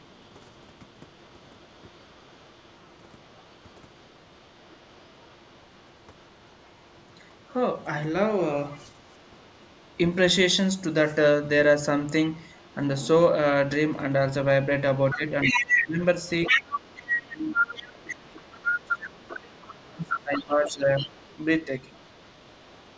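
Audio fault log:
0.00–7.85 s, 8.71–9.96 s, 12.34–12.75 s, other side's voice leaking through: a faint second voice sits far beneath the main speech, about 35 dB down. It is likely loudspeaker echo the canceller left behind. It is a separate talker rather than a smeared copy of the main voice, so it is not room reverberation.
15.10 s to the end, other side's voice leaking through: the leaked voice rises to nearly full level, only about 5 dB under the speech, and runs continuously. Here the echo canceller likely failed to cancel most of the loudspeaker return, so two talkers overlap audibly instead of a faint background trace.
15.14–21.09 s, speech suppressed in double talk: while the other side is loud, the main speech dips by as much as about 25 dB, in pieces adding up to roughly 4 s. It is likely the canceller ducking both voices at once. The drops coincide with the overlap and come as level dips and choppy fragments, not the clean gaps of a transmission dropout.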